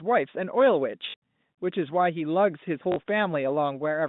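Packet loss with last packet repeated: at 1.10 to 1.14 s and 2.92 to 2.96 s, 40 ms gaps, which fits two 20 ms packets each, were filled by replaying audio, giving brief robotic stutters over the narrow telephone band.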